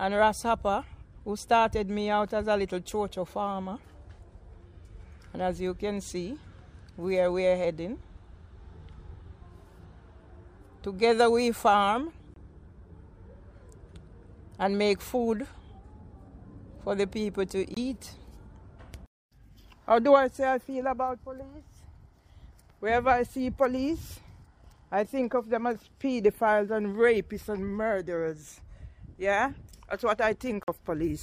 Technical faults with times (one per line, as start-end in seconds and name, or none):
12.34-12.36 Bluetooth dropout
17.74-17.77 Bluetooth dropout
30.63-30.68 Bluetooth dropout